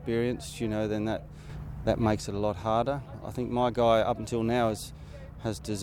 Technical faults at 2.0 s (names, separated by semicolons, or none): sudden gain jump